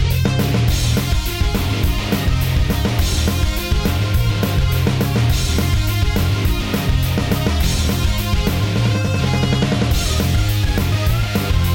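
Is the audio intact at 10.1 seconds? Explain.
Yes, at 10.1 seconds the audio plays through cleanly, with no dropout, click, distortion or other fault at that moment.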